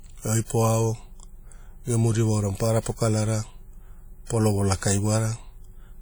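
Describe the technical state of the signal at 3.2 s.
At 3.2 s the speech carries plainly audible WMA compression, present through the whole clip rather than at that moment alone, and likely the cause of the damage. A transform codec smears quantisation noise over tens of milliseconds and drops weak spectral lines, so the sound rings and turns washy, with hiss swelling and fading alongside the signal, which fits a low bitrate near 48 kbps. Unlike MP3-style damage with a hard low-pass, the band here still reaches about 20.1 kHz.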